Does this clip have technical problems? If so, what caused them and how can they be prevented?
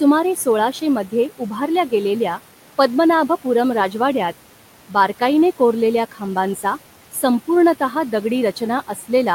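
Yes. Near the very end, between 8.87 and 9.05 s, the speech suddenly thins and sinks, losing up to about 9 dB, so a soft tail of sound seems swallowed, with roughly a tenth of a second affected in all. This is speech cut by the noise suppressor: the faint speech energy there resembled the room noise, which sits about 20 dB below the speech, and the suppressor turned it down as background. Preventing it means using gentler suppression or a lower noise-gate threshold so quiet speech endings stay above the point where the suppressor treats them as noise.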